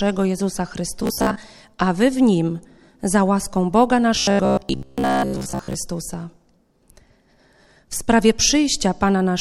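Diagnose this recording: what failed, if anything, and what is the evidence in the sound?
Robotic sound from repeated short buffers at 1.03–1.36 s and 4.15–5.79 s: the speech collapses into a rigid metallic buzz at 66.7 Hz, which fits a 15 ms block being replayed. This is likely a driver or buffer underrun, with most real audio skipped.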